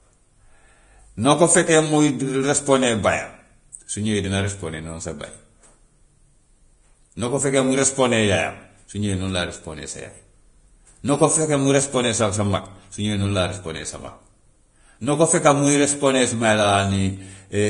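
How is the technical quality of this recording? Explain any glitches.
The technical quality is poor, with heavy lossy-codec damage across the whole speech clip. Vorbis compression, throughout: nothing survives above 10.5 kHz, and the treble that remains is coarsely quantised into noise-like residue, which fits a bitrate near 31 kbps. The likely cause is a low-quality Vorbis encode, heard as hissy, grainy sibilance, roughened tone and smeared consonant onsets.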